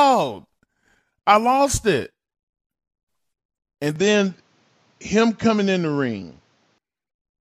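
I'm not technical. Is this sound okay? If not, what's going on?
No. From about 3.96 to 6.78 seconds the speech turns duller and a little boxy, as if the top end were shaved off (nothing above about 7.6 kHz), then clears again. This is most likely an input switched to a poorer device: the system briefly picked up a different microphone. Unlike a simple muffling effect, the switch brings its own tone and a faint new background hiss, with no gap and no change in loudness.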